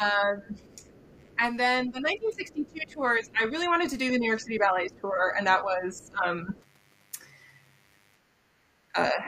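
Throughout, interference from the 50 Hz mains is getting into the signal path, adding a steady, raspy mains buzz roughly 35 dB below the speech.

From 0 to 0.83 s, the echo canceller likely mistakes simultaneous talk for echo, so speech is suppressed in double talk, dipping around 10 dB. From 0.55 to 1.37 s, residual loudspeaker echo likely escapes cancellation, and the other side's voice leaks through faintly, roughly 30 dB down.

The same double-talk suppression returns from 1.36 to 6.56 s, pulling the speech down by as much as 15 dB. Faint scraps of the other side leak through at 3.32 to 3.65 s, at 4.94 to 5.01 s, and, a little louder, at 5.94 to 6.63 s.

From 8.29 to 8.53 s, the canceller clamps the microphone while the loudspeaker plays, so the background is gated and briefly drops about 6 dB.

From 8.92 s to the end, double talk again ducks the speech by around 10 dB.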